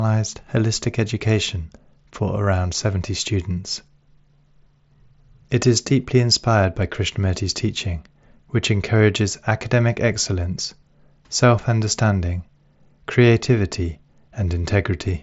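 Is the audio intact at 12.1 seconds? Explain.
Yes, at 12.1 seconds the speech runs through intact, with no dropout, click or other fault at that moment.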